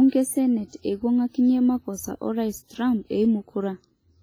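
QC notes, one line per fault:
Throughout: WMA compression artefacts, heavy. The speech sounds washy and rings around each syllable. A hiss rises and falls with the level of the voice. Quiet detail between stronger parts drops out. This is likely a transform codec with long blocks, spreading quantisation noise over tens of milliseconds and zeroing weak spectral lines. The depth of the damage fits a low bitrate near 24 kbps.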